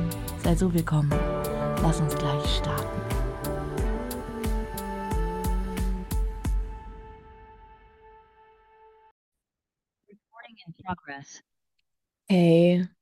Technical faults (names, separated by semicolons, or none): none